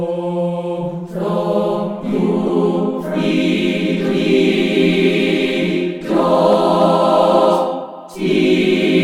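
Short glitches at 2.47–2.50 s, 4.55–4.58 s and 6.01–6.04 s, loud then progressively fainter: corrupt frame decoded, with flipped bits misplacing energy across several damaged frames.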